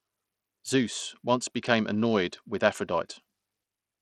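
Throughout, the speech sounds gritty, its treble flickering and dropping out: likely Bluetooth SBC compression starving the top sub-bands, which fits a bitrate near 80 kbps.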